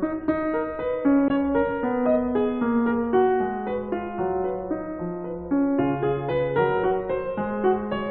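At 1.27 s the compressed stream carries damaged data: a short stretch of the encoded music has corrupted bytes, so the decoder misreads the frames there, loses its place in the stream and has to hunt for the next valid frame header before it can resume. For about 50 ms, from 1.27 to 1.32 s, the music gives way to a brief, artificial chirp or blip before normal playback returns.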